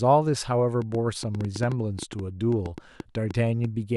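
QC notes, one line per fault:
0.82–3.65 s, train of clicks: about twenty short pulses at roughly 6.4 per second, spaced unevenly, tick over the speech and through its pauses, peaking about 5 dB above the signal. The clicks share a similar shape, which fits an intermittent source, likely electrical interference or a struggling interface, rather than damage to the recording itself. On a waveform they show as sharp isolated spikes; a spectrogram shows thin full-height vertical lines at irregular intervals.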